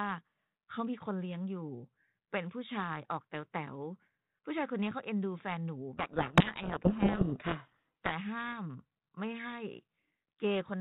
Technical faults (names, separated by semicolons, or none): codec payload misread